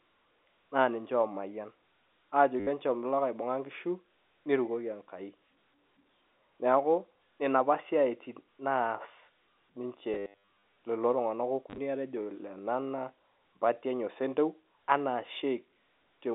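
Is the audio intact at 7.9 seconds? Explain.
Yes, the speech at 7.9 seconds is intact, with no dropout, click or distortion beyond the narrow band of ordinary G.711 telephone coding.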